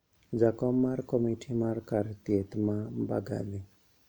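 A short speech recording with no technical faults to report: the signal runs without interruption, distortion, level problems or timing errors.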